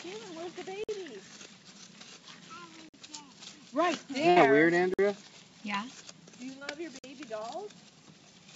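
At 0.84 s the first gap between chunks opens: the audio arrives in 2-second blocks and about 50 ms of silence is left at each join, so nothing is lost, but a short hole of silence cuts in. The same gap returns at 2.89 s.

From 4.30 to 4.38 s a burst of packet loss removes about 60 ms of audio. The receiver covers the hole by stretching the last sound for roughly 62 ms while turning it down, giving a fading held texture before the audio picks up further along, with that stretch missing.

The next chunk gap falls at 4.94 s.

Between 6.59 and 6.63 s a short concealed packet loss drops about 20 ms. The decoder patches it with around 17 ms of extrapolated sound and blends back, leaving a brief smear or wobble.

The last chunk gap follows at 6.99 s. Through all of this the call codec keeps the sound band-limited, with nothing above 8 kHz.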